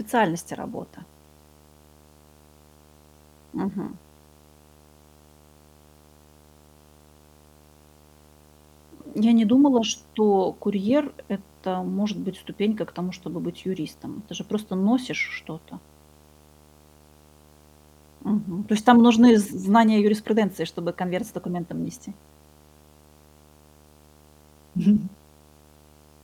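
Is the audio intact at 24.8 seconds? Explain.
No, not quite. At 24.8 seconds, as through the whole clip, there's video or display buzz under the speech. A screen or its video cable is leaking into the audio path, so you get a steady buzz at the picture's 75 Hz field rate with a fizzy hash riding on top of it. It sits roughly 30 dB below the speech.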